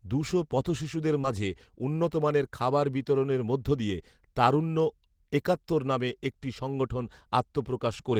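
At 1.21 to 1.26 s, between "দুশো পথশিশুদের" and "মাঝে উন্নতমানের খাবার বিতরণের", there is a short concealed packet loss. About 20 ms of audio arrived too late, and the receiver extended the preceding sound to cover it before blending back. The result is a brief smear, not the silent gap or sharp click a plain dropout would leave.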